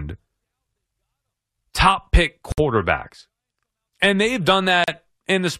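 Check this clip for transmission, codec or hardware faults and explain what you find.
Two short breaks interrupt the speech, both gaps at a join of encoded pieces: at 2.52 s lasting 59 ms, and at 4.84 s lasting 38 ms. Separately encoded segments were spliced without trimming each run's start-up silence and last-frame padding, so silence opens mid-speech. Unlike a packet-loss dropout, the speech resumes exactly where it stopped, with nothing skipped.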